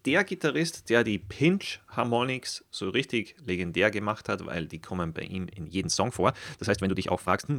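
From 5.62 s, just after "die kommen bei ihm", to 7.58 s, a time-stretched section plays about 1.52 times faster at unchanged pitch, likely from software dropping short pieces. It sounds rushed. A spectrogram shows level harmonics with syllables crowded together.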